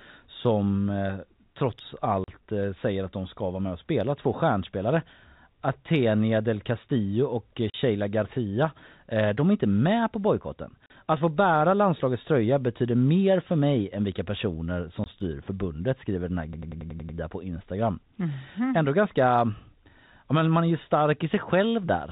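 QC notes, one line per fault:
2.24, 7.70, 10.86 and 15.04 s, packet loss filled with silence: the speech drops out completely in hard-edged gaps, 40 ms at the first three and 20 ms at 15.04 s, which points to 20 ms packets lost in pairs and once singly, replaced by digital silence.
16.53–17.18 s, system hang loop: the same 93 ms fragment repeats seven times at about 10.8 Hz, producing a machine-gun stutter. This fits a 4096-sample ring buffer cycling while the system stalled. Roughly 0.7 s of real audio is missing.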